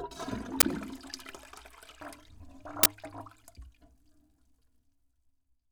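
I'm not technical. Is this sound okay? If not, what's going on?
No, not quite. There are two brief glitches, at about 0.60 s and 2.83 s, each a harsh burst of digital noise lasting roughly 23 ms. This is an uninitialised buffer: the playback system sent out a chunk of memory before any real audio had been written into it, so leftover junk data played as sound. The length of each burst fits a 1024-sample block being played before it was filled.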